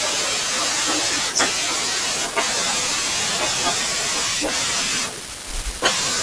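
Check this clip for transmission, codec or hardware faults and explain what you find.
Nothing faulty can be heard anywhere in this speech.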